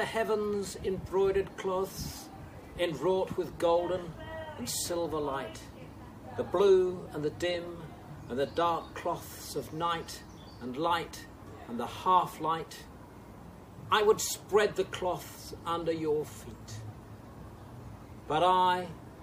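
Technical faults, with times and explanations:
No technical faults can be heard.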